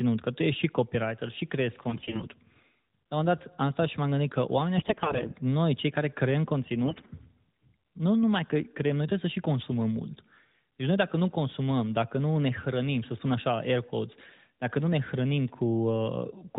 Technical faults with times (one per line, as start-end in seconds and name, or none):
1.90-2.26 AMR bit errors
4.78-5.34 AMR bit errors
6.84-7.16 AMR bit errors